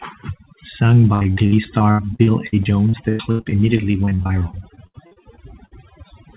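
Overdone noise removal runs throughout. The reducer cut every band near its noise estimate, leaving near silence with twinkling specks. A spectrogram shows a dark floor with isolated dots and ragged, holey harmonics, all stopping at 4 kHz.

From 1.14 to 5.73 s, repeated packet loss gives a robotic sound. Thirty-three gaps, the longest 98 ms, are each patched by extending the preceding sound, so about a quarter of the stretch is fill. The result is choppy, with pieces missing. The waveform shows looping cycles, and the spectrogram shows frozen harmonic blocks.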